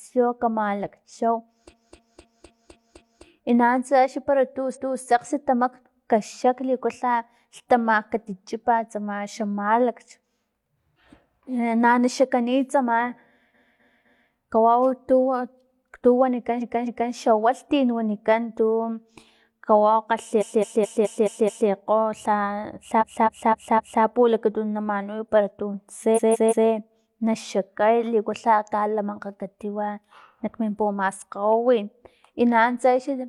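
Repeated frames stutter this speech at 1.69–3.22, 4.72–4.98, 13.50–14.27, 16.58–17.09, 20.37–21.65, 22.98–24.0 and 26.13–26.65 s. Each time, a short compressed block, about 256 ms long and 213 or 171 ms at 20.37 and 26.13 s, is decoded again and again, from one extra pass up to six. You hear the same fragment looping, and the clip runs longer by the repeated time.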